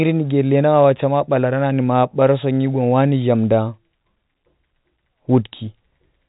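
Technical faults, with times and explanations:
No technical faults occur in this speech clip.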